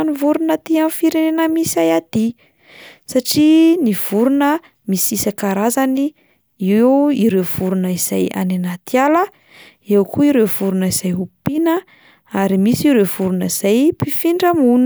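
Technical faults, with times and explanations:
No technical faults can be heard in the signal.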